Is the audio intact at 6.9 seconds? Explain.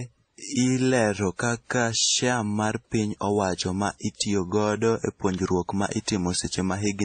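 No. At 6.9 s, as throughout, the speech carries the layered damage of transcoding between lossy codecs, likely a low-rate MP3 re-encoded to WMA. Nothing sounds above 9 kHz, and smeared warbling sits under a second set of artefacts, unlike the single texture of one codec.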